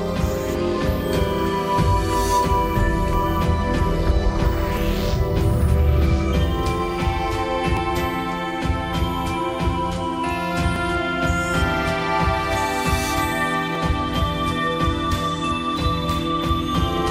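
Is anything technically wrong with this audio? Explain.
Yes. Audio is missing between chunks at 1.78, 7.77, 10.76, 13.75 and 16.75 s, each a brief skip of a few milliseconds. This is likely from processing in 3-second chunks, losing a sliver at each handover and joining the two sides without silence. A waveform shows an abrupt seam, and a spectrogram shows a thin vertical break.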